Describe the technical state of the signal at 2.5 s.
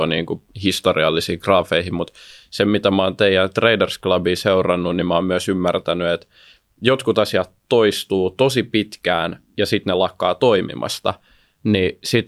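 At 2.5 s the speech signal is intact, with no dropout, clipping, glitch or other fault at that moment.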